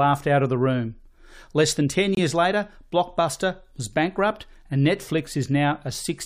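At 2.15 s there's a corrupt frame muted: a sudden hole of silence about 32 ms long, which fits a single compressed frame that got damaged, rejected by the decoder, and replaced with nothing. The speech cuts out abruptly, but the timing afterwards stays intact.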